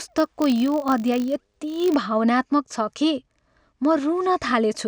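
A filter restarted on every block runs from 0.00 to 1.97 s of this speech clip. The filter loses its memory at each block boundary and begins processing from silence, so every block opens with a small transient. These arrive every 20 ms, forming a steady 50 Hz buzz laid over the speech. The buzz rises and falls with the signal's level, growing louder on stronger passages and receding in quieter ones, until it stops at 1.97 s.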